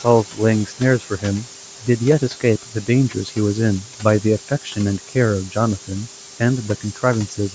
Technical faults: low bit depth with noise shaping; noise suppressor artifacts; speech cut by the noise suppressor

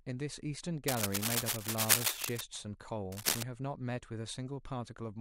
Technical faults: cable scratch noise

